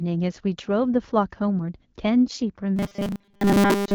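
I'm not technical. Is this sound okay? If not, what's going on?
No. There are two problems, both near the end.

From 2.25 to 2.42 s you hear AMR bit errors. The phone link was weak. Some less important bits of the speech data arrived damaged, roughly one bit in twenty. The voice keeps its level but sounds hoarse, scratchy and gargly.

From 2.76 s to the end, the speech turns into robotic sound from repeated short buffers. It becomes a stiff, metallic buzz at 200 Hz that still loosely follows the speech. The likely cause is audio arriving too slowly. The software keeps repeating a tiny slice, about 5 ms long, and most of the real sound is skipped.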